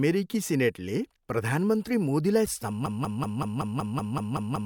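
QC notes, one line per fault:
2.46–2.48 s, damaged data in a compressed stream: corrupted bytes made the decoder lose frame sync and resync further on, giving a brief glitch where the frames were misread.
2.86 s to end, broken-record loop: a 0.19 s fragment of speech repeats exactly ten times back to back, likely because playback or the stream stalled and kept resending its last buffer, so the following audio is lost.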